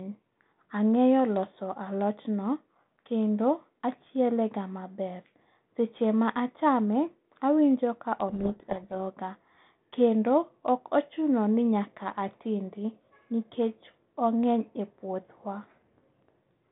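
From 8.28 to 8.94 s, just after "ma achame awinjo ka", a codec payload misread reverses the bit order of the G.726 code words, burying the speech in sudden harsh distortion. Low-bitrate hiss would instead follow the level of the speech throughout.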